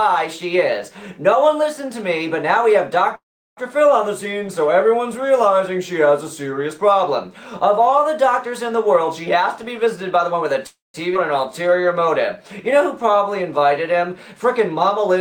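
At 3.15 s the sound stops abruptly. A brief fading continuation of the last sound trails off into silence, and the audio resumes at 3.59 s exactly where it left off, with nothing lost. This is a call audio freeze, and the likely cause is packets held up in transit, so the jitter buffer ran dry. The receiver bridged about 0.42 s, roughly 0.37 s of it silent, and every later moment now plays that much later.

From 9.41 s to 10.56 s the audio sounds hurried: it runs at about 113% speed with the pitch unchanged. This is a jitter buffer speed-up. The buffer held more than its target, so the receiver trimmed many tiny pitch-period slices in quick succession, around 0.15 s in total, to pull the delay back down.

A second call audio freeze follows from 10.67 s to 10.96 s. A short fading tail of the preceding sound gives way to about 0.17 s of silence, and playback then continues with nothing missing. 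Again the likely cause is late packets starving the buffer, which forced a bridge of about 0.27 s and added that much delay.

At 11.14 s the audio jumps forward almost seamlessly, with only an 11 ms join, and roughly 0.4 s of material is simply gone. This is a skip ahead. With later audio already waiting, that stretch was discarded, which cancelled out much of the delay the freezes had built up.

From 11.52 s to 14.29 s the audio drags at about 92% speed at the same pitch. Sounds are drawn out. This is a jitter buffer slow-down. With its reserve running low, the receiver repeated single pitch periods and bits of pauses over and over, adding about 0.23 s to rebuild its cushion.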